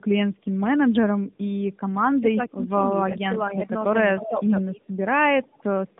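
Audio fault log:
throughout: tandem speech coding. Two AMR-NB passes with a G.711 hop between compound each other's errors, leaving rough, muffled, warbly speech with nothing above 3.8 kHz.
2.2–2.71 s, 3.17–3.3 s, 4.14–4.33 s: speech suppressed in double talk. The speech dips by up to about 15 dB, then about 10 dB, likely from an echo canceller attenuating during overlapping talk.
3.55–3.69 s, 4.17–4.47 s, 5.44–5.63 s: echo leak. A copy of the speech returns 249 ms late, at about −25, −15 and −35 dB, likely from incomplete echo cancellation.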